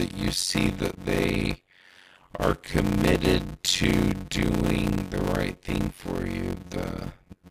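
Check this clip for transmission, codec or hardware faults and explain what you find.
The speech carries one fault throughout: a block size mismatch (padded). From start to finish, each output block contains only about 256 samples of real audio. The next stage reads larger blocks and fills the remainder with zeros, which fits a read size of around 480 samples. The repeating silent gaps produce a buzz at 91.9 Hz, the block rate. Because each block is stretched with silence, the speech plays at 0.533 times normal speed, noticeably slow and choppy, while its timbre stays.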